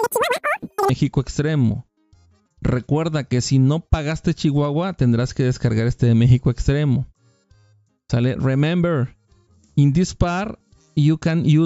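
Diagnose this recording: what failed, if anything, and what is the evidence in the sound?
A wrong sample rate fault runs from 0.0 to 0.9 s, at the playback stage. Across that opening stretch the sound is three times too fast and about 19 semitones too high, with tempo and pitch shifted together by the same ratio. That locked pairing shows the samples were clocked out faster than they were captured, with no rate conversion, which fits 16 kHz material played back at 48 kHz.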